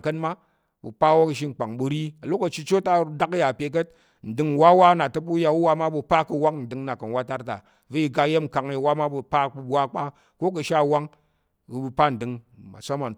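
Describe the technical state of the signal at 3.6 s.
At 3.6 s the speech signal is intact, with no technical fault present at that moment.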